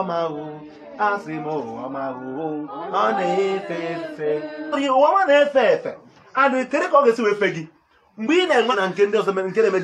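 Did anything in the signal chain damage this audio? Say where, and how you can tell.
Yes, there's damage at the codec or storage stage: compressed frames skipped. At 2.67 to 2.71 s, 4.72 to 4.75 s and 8.71 to 8.75 s the audio jumps forward, losing around a third, a fifth and a third of a second respectively. The jump sizes fit whole 46.4 ms frames that were either missing from the file or thrown out by the decoder as corrupt.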